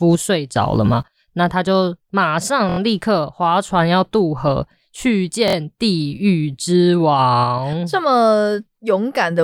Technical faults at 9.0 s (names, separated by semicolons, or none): none